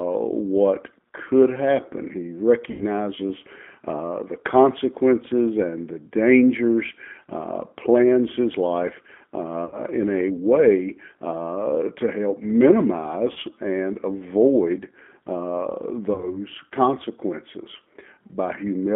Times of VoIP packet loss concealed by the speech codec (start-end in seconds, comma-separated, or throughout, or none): 2.71-2.85, 9.65-9.84, 13.32-13.38, 16.14-16.40